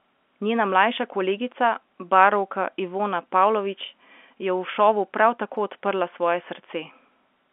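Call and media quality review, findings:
No call or media quality findings; the speech passes through G.711 telephone coding within its usual 250 Hz to 3.4 kHz line band.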